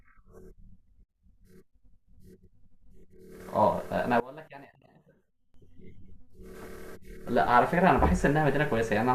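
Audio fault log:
4.20–5.54 s, one channel inverted: the speech drops about 22 dB and nearly vanishes. One channel's polarity was likely flipped, so the centred voice cancels when summed to mono.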